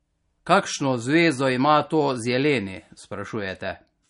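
Speech, with compression damage that is plainly audible from start to finish. Nothing is present above 10.6 kHz, so the treble is cut flat. The likely cause is MP3 compression at a low bitrate, which fits roughly 40 kbps, where weak frequency lines are discarded.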